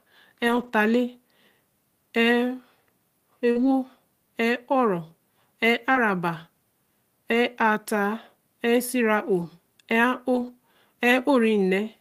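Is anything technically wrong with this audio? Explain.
Yes, this speech clip has packet loss in two forms. Lost packets rebuilt from error correction: at 0.47–0.69 s, 3.55–3.65 s, 5.95–5.97 s, 7.33–7.35 s, 9.41–9.43 s and 10.35–10.49 s, the decoder substituted low-bitrate backup copies carried in following packets, so nothing drops out, but those stretches sound rougher and noisier. Short concealed packet loss: at 3.51–3.57 s and 5.93–5.97 s, audio arrived too late, so the receiver extended the preceding sound for roughly 40 ms and 20 ms, giving a brief smear or wobble.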